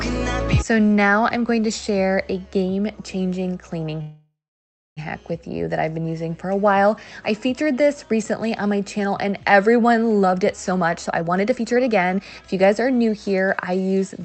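At 4.01 s the sound stalls for about a second, until 4.99 s. That's a call audio freeze, most likely packets held up in transit that left the jitter buffer with nothing to play. The last bit of sound gets stretched into a fading buzz, then roughly the final 0.63 s is silence. When playback picks up again it continues right where it stopped, so nothing is lost, but everything after is now running about 0.95 s late.

From 10.18 s to 13.49 s you get a jitter buffer speed-up. The buffer had built up more audio than it wants, so the receiver kept trimming out tiny slices a pitch period or so at a time to catch up. Playback runs at about 129% speed with the pitch unchanged, and roughly a second gets shaved off. It comes across as hurried rather than squeaky. The whole clip also tops out around 8 kHz, which fits Opus at about 40 kbps on the call path.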